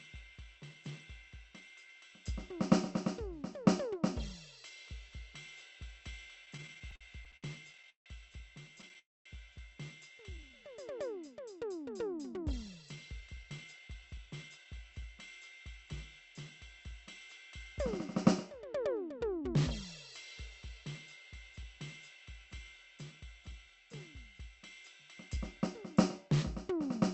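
Repeated stalls (stutter) run from 6.45 to 8.97 s: packets arrived late, so the jitter buffer kept emptying and the last sound was stretched over the gaps, the longest 163 ms, making the music drag and stutter.

A call audio freeze follows at 8.99 to 9.27 s, likely from packets held up in transit. The last sound carries on briefly, then drops to silence for about 230 ms before resuming where it stopped.

Jitter buffer slow-down at 10.30 to 10.68 s: the receiver repeated single pitch periods to rebuild its reserve, adding 58 ms and running the music at 87% speed with unchanged pitch.

Jitter buffer speed-up at 12.45 to 14.65 s and again at 25.14 to 25.67 s: with excess audio buffered, short pitch-period pieces were cut, so the music rushes at 115% speed, losing about a third of a second, and then at 107%, losing a few tens of milliseconds. In both spans the tempo wavers.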